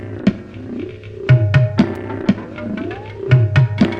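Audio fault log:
1.95 s, gap between stream segments: a brief, hard-edged dropout cuts into the sound for only a few milliseconds, about 4.4 ms of silence, heard as a tiny click-like hole rather than a fade. It occurs where one stream segment hands over to the next, which fits segments of about 4 s. Their time stamps fail to meet exactly, so the player pads the space with silence; nothing is lost, the sound simply resumes slightly later.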